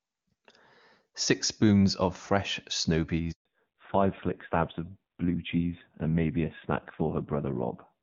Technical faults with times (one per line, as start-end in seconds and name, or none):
3.31-3.45 handover gap
3.45-8.03 fallback to narrowband